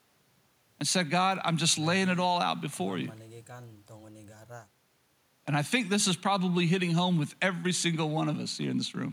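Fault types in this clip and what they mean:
No technical fault can be heard in this speech recording. Nothing in the sound points to trouble in how it was captured, processed or carried.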